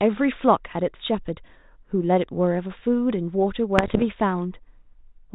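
Bit errors on an ADPCM link strike from 3.78 to 4.03 s, at a rate of roughly one bit in a hundred. Each flipped bit knocks the decoder's step size and predictor off track, so the error rings on briefly, giving pops, rough bursts and short jumps in level over the G.726 speech.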